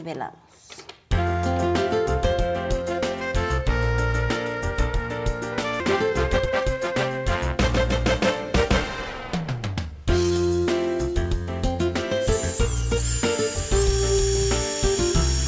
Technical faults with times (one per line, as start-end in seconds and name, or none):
5.80 skip ahead
6.03-7.19 jitter buffer speed-up
9.41-10.31 jitter buffer speed-up